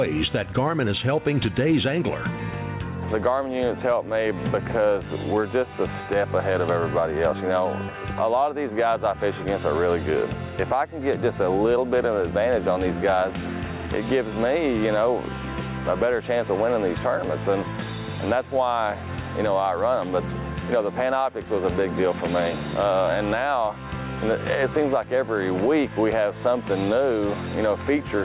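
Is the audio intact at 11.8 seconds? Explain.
No. At 11.8 seconds, as throughout the clip, there is gain pumping: loud and soft parts end up closer in level and the sound is squashed, with level swings of around 15 dB. The likely cause is input gain set far too high, with a fast limiter clamping it down.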